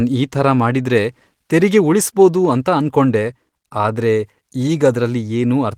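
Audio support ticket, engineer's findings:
No faults found in this speech recording.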